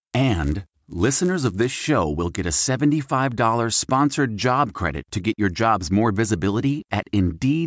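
From 0.0 to 1.9 s, just before "will get a", a 100 Hz buzz sits on the speech. This is a resampler restarted on every block. Each 10 ms block was converted alone, so every block edge carries a small error.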